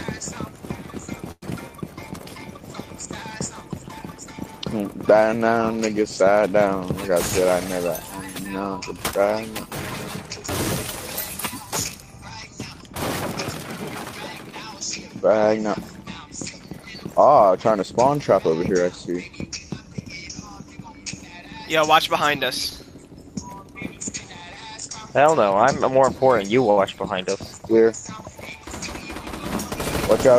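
At 1.31 s the sound stops moving forward for a little over a tenth of a second (107 ms). The last sound carries on as a fading buzz that drops to about 40 ms of silence before the audio resumes exactly where it left off, with nothing lost. This is likely a call audio freeze: packets were held up in transit, the jitter buffer ran dry, and the receiver filled the wait. The fade into silence marks it as a full freeze rather than a brief stretch.

From 7.09 to 7.80 s, and again from 8.59 to 9.66 s, the audio runs about 6% fast while the pitch stays put. This is jitter buffer speed-up. The buffer had built up more delay than it aims for, so the receiver trimmed out tiny pitch-period slices over and over, removing roughly 50 ms in the first stretch and roughly 70 ms in the second. It sounds slightly hurried but remains continuous. Unlike a freeze or stall, this shortens the audio instead of adding time.

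At 26.70 s a short stall from a late packet holds one sound about 68 ms too long, with a faint buzzy edge. Then playback picks up at the same point, and nothing is missing. It resembles the earlier freeze but is briefer and never fades to silence. The receiver simply stretched the last sound until the late packet turned up.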